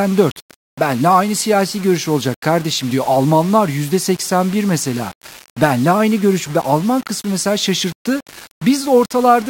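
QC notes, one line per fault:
Throughout: low bit depth without dither. The speech has a grainy, buzzy edge that rises and falls with the sound itself, worst in the quiet tails where it goes gritty and sputters or drops out between steps. That points to the signal likely being rounded to just 5 bits with no dither, so the rounding error tracks the waveform instead of sitting as steady hiss, and it only sits around 20 dB under the speech.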